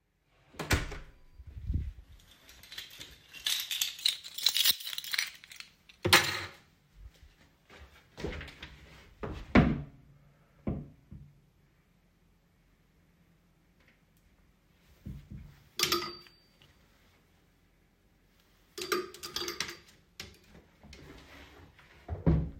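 From 2.00 to 4.01 s there's a wrong sample rate: everything slows to about 0.92 speed and drops roughly 1.5 semitones, which fits 48 kHz audio played at 44.1 kHz.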